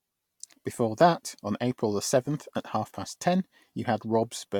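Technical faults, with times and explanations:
No technical faults detected.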